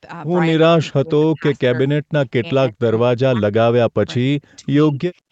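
From 0.82 to 1.44 s, 1.63 to 2.17 s, 2.34 to 2.85 s, 3.1 to 4.02 s, 4.18 to 4.74 s and 4.9 to 5.26 s, the speech drops sharply or vanishes in pieces, likely speech suppressed in double talk. Unlike codec dropouts, these gaps track the far side's activity.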